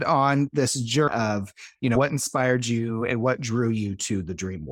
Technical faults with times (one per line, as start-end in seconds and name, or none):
1.07-1.11 compressed frames skipped
1.95-1.99 compressed frames skipped